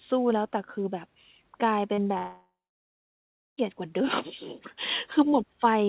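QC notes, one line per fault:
1.94–1.99 s and 2.03–2.07 s, short concealed packet loss: roughly 40 ms and 20 ms gaps bridged by continuing the last sound, heard as brief smears.
2.17–3.59 s, long network dropout: a fading buzz or hiss, then about 1 s of near-silence, likely 1.4 s of lost packets; the waveform goes flat and the spectrogram below 4 kHz goes blank.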